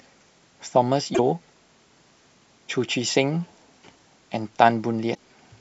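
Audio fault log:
1.11–1.19 s and 5.11–5.19 s, damaged data in a compressed stream: two brief garbled blips, each about 80 ms, where the decoder lost sync on bad frames and hunted for the next header.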